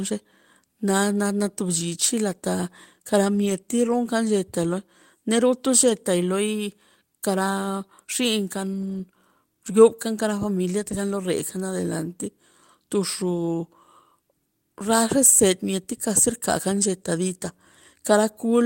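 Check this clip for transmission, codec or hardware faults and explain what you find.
Packet loss was concealed by error correction at three points. At 3.37 to 3.51 s, 5.81 to 5.91 s and 8.73 to 8.99 s, there is a lost packet rebuilt from error correction. Packets went missing, and the decoder replayed the low-bitrate backup copies carried in the packets that followed. There is no gap, but the speech briefly turns rougher and noisier over roughly 80, 60 and 140 ms of rebuilt audio, which points to several separate lost packets.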